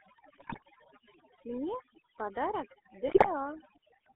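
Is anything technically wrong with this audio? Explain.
Yes. Throughout, the background drops and breaks up into twinkling specks: overdone noise removal, cutting bands judged as noise and taking quiet speech detail with them. The voice also has a buzzy, gravelly roughness inside a 250 Hz to 3.4 kHz band. That fits the GSM full-rate codec at 13 kbps, which models the vocal tract and excites it with sparse regular pulses. From 0.38 to 0.88 s and 3.07 to 3.29 s the speech breaks into squawks, pops and gargling. These are GSM bit errors: corrupted filter, pitch or gain values distort the spectrum or spike the level frame by frame.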